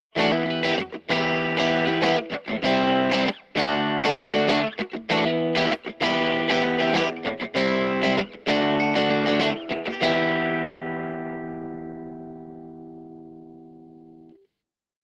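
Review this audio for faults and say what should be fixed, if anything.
At 3.61 to 3.70 s and again at 3.97 to 4.06 s, the sound briefly stretches into a fading held buzz or hiss for about 60 ms, then jumps ahead. This is a burst of packet loss: the receiver extended the last sound to cover each gap, and about 60 ms of audio is missing each time.

From 4.09 to 4.36 s and from 10.63 to 10.84 s, a longer fading tail of about 240 ms and 180 ms respectively replaces the sound, which then resumes further on. The likely cause is a long network dropout, with the concealment filling the whole gap rather than going silent, and that stretch of audio lost.

To prevent these, use a more reliable network path with a larger jitter buffer and forward error correction or retransmission, so that late or lost packets can be recovered.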